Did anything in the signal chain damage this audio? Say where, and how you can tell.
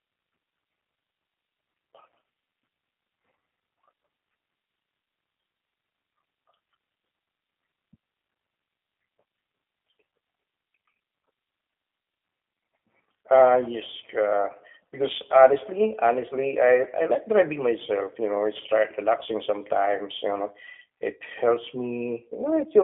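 Yes, at the codec stage: it's G.729 throughout, held to 250 Hz–3.4 kHz with that rough, synthetic edge of speech rebuilt from a vocal-tract filter and sparse pulses.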